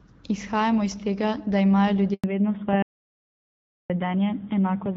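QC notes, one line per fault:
2.14 to 2.24 s, handover gap: right after "iz tega da imajo" the speech fades out within a few tens of milliseconds and stays silent for 100 ms while the call moves between networks and no speech frames arrive. The quick fade into silence sets it apart from a plain dropout, which cuts hard, and the band changes on the other side, which points to a network switch rather than a failed input.
2.24 s to the end, fallback to narrowband: after the handover the call drops from HD Voice at 12.65 kbit/s to narrowband AMR at 7.4 kbit/s. Nothing above 4 kHz survives, so sibilants lose their edge and the speech turns duller and rougher for the rest of the clip. Unlike a gentle low-pass or muffling, the top is simply gone past a fixed 4 kHz limit and the texture coarsens at the same moment, which marks a codec change.
2.82 to 3.90 s, audio dropout to silence: the speech cuts off abruptly and the next 1.07 s is silence, with no room tone underneath, before the sound returns mid-flow. 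The completely empty gap and the hard edges distinguish it from the handover gap, which is short and fades out first. It likely comes from the input being lost, through a disconnect, a failed link or an accidental mute, while silence kept being written.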